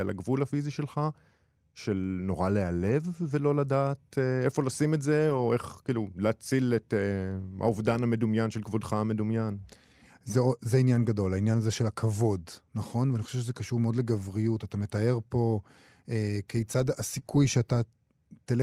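A speech recording with brief rough, noisy patches at 2.87–2.89 s, 5.29–5.39 s, 8.49–8.51 s and 10.95 s. The 5.29 s patch has about 60 ms rebuilt, which fits three separate packets. These are lost packets rebuilt from error correction: the following packet carried a low-bitrate copy, so there is no gap, only coarser audio. At 17.19–17.23 s a short smear replaces about 20 ms of sound. This is short concealed packet loss, where the decoder extended the preceding sound to fill the hole before blending back into the real signal.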